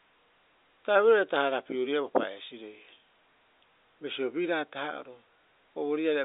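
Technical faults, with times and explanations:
Nothing goes wrong in this speech. It comes over a G.711 telephone line with nothing above about 3.8 kHz, which is simply how that kind of line sounds.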